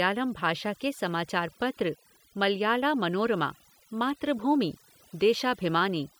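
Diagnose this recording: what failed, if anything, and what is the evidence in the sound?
Overdone noise removal runs through the whole speech clip, a call-processing fault. A noise suppressor set too aggressively pulls individual frequency bands down whenever they sit near its noise estimate, so the background drops and breaks up into twinkling specks, and softer speech detail vanishes.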